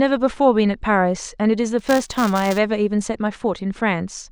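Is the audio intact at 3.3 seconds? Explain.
Yes, the speech at 3.3 seconds plays through intact, with no dropout, click, distortion or other fault at that moment.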